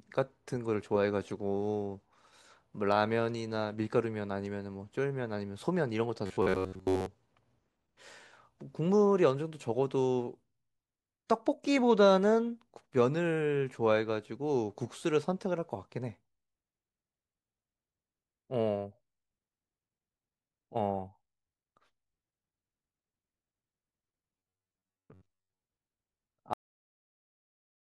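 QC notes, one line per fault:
6.26–7.06 s and 24.38–25.62 s, robotic sound from repeated short buffers: a rigid, metallic buzz near 94 Hz. Most of the audio is replaced, likely by one 10.7 ms buffer replaying.
26.53 s, cut-off end: the speech stops mid-sound and drops straight to digital silence with no decay, as the final buffers never played.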